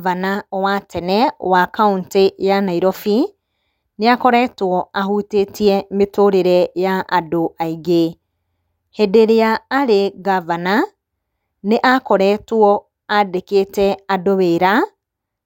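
No technical faults can be heard anywhere in the recording.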